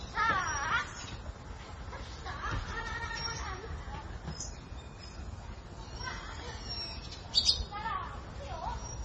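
Throughout, nothing sounds above 9 kHz, and flickering weak bands make the audio swirl watery with smeared attacks, likely heavy MP3 compression at about 24 kbps.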